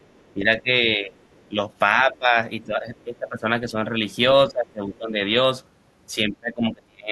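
Other side's voice leaking through appears at 0.0–0.33 s, 1.21–1.48 s and 2.98–3.04 s, very faint at about 40 dB under the speech. It is likely residual loudspeaker echo that the canceller missed, and shows as weak, ghostly harmonic traces on a spectrogram. Speech suppressed in double talk follows at 0.34–1.16 s, 1.49–1.57 s, 1.95–4.0 s, 4.48–5.37 s and 6.15–7.11 s. The voice dips by roughly 10 to 30 dB, deepest in the final stretch, likely because the canceller ducked the talker along with the echo. On the waveform the envelope sags and chops, and the spectrogram's upper bands thin out.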